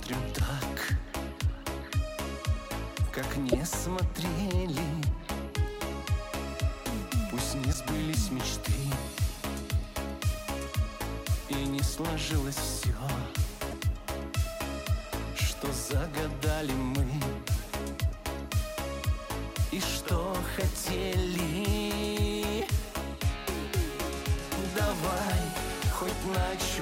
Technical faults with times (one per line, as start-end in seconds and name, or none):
0.38-0.41 broken MP3 bit reservoir
3.51-3.55 broken MP3 bit reservoir
7.72-7.75 broken MP3 bit reservoir
13.70-13.73 broken MP3 bit reservoir